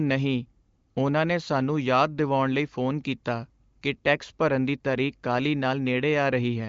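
Nothing stood out on listening to this speech, which comes through the AMR wideband (HD Voice) codec at a rate high enough to keep it clear, with nothing above about 7.5 kHz.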